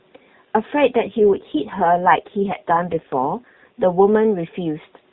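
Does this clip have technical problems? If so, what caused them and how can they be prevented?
Yes. An AMR rate drop runs from 0.96 to 3.80 s: the speech turns rougher and more synthetic, consistent with the codec falling from 12.2 to 4.75 kbps while the network spends the freed bits on error protection. The narrowband AMR-NB band stays unchanged, with no gap. Keeping the handset on a stronger radio link, or using a wideband or higher-priority bearer, prevents these downshifts.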